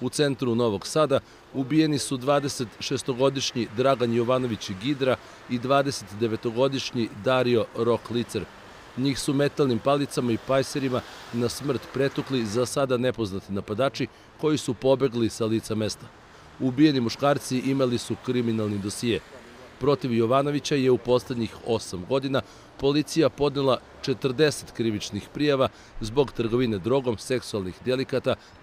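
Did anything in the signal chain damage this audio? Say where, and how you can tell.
No, nothing in the signal chain stood out as damaging this audio on listening.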